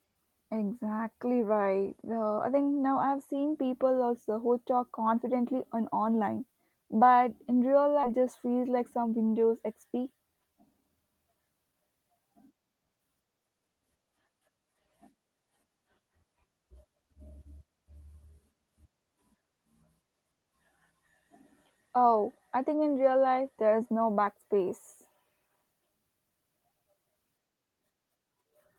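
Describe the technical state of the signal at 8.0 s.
At 8.03 s there is a skip ahead: about 0.4 s of audio was discarded while later audio was already queued, so playback leaps forward with no filled gap. Right after "online but in real", the speech jumps abruptly, those syllables simply missing and the two sides spliced together.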